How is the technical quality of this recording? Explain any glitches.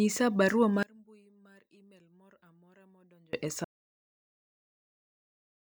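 The recording has two serious faults.

From 0.83 to 3.33 s, the speech drops by about 29 dB and turns faint. The likely cause is one channel inverted. With reversed polarity on one stereo side, the shared centre content cancels when the channels sum to mono. Only a weak difference signal survives.

At 3.64 s the sound cuts off into complete silence, with no room tone, and it stays silent to the end. This is an audio dropout to silence. The input was likely lost and the recorder kept writing silence. Whatever followed is gone.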